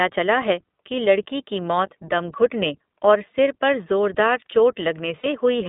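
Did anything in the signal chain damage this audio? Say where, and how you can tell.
Yes. iLBC codec damage runs throughout, at the codec stage. The speech is confined to roughly 200 Hz to 3.6 kHz and sounds plainly rough and synthetic, which fits the 15.2 kbps mode with 20 ms frames.

Lost iLBC frames occur at 3.33 s and at 5.20 to 5.27 s, a network-stage fault. The decoder fills the gap with a held, buzzy repeated pitch cycle, about 20 ms and then 40 ms long.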